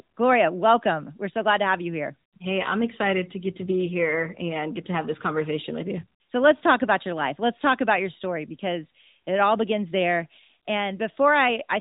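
Speech recording with no technical faults to report.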